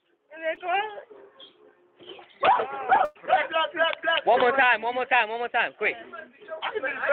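At 0.55 to 0.59 s, a short concealed packet loss: about 20 ms of audio arrived too late, and the receiver filled it by extending the preceding sound, giving a brief smear or wobble.

From 3.05 to 3.17 s comes a burst of packet loss. About 100 ms never played, and the receiver stretched the last sound across the gap while fading it, so it holds as a buzz or hiss before jumping ahead. A spectrogram shows frozen, dimming horizontal bands ending in an abrupt seam, all within the call path's 8 kHz Opus band.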